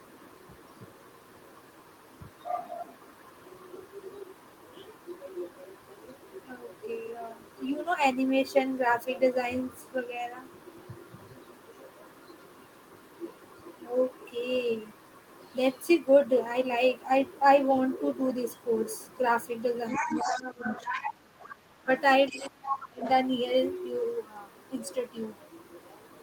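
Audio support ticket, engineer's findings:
Other side's voice leaking through. Likely residual echo: the near-end echo canceller is not fully removing loudspeaker playback from the mic path. A second voice is audible at 19.9–21.11 s (about 5 dB below the talker), 21.41–21.55 s (about 20 dB below), 22.27–22.5 s (about 15 dB below), 22.69–22.77 s (about 5 dB below) and 23.03–23.09 s (about 10 dB below). These are one longer stretch and short scraps clustered between 20 and 23 s, loudest at the start of the run.

Speech suppressed in double talk. Both ends talk simultaneously, and the canceller, likely unable to separate near-end speech from echo, attenuates the whole mic signal. The talker dips at 19.99–21.07 s (about 10 dB at deepest), 21.79–21.89 s (about 20 dB) and 22.31–23.03 s (about 25 dB). The first and third drops overlap the leaked voice.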